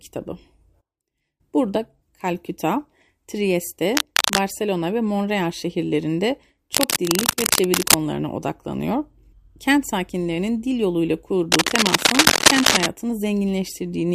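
At 3.95 to 4.42 s, 6.73 to 7.97 s and 11.52 to 12.87 s, cable scratch noise rasps over the speech, about as loud as it and louder in the last burst, likely from a worn connector being moved. It shows as ragged, broadband vertical smears and jagged waveform spikes.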